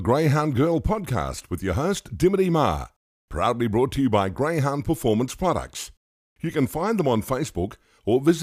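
Nothing is technically wrong with this speech recording.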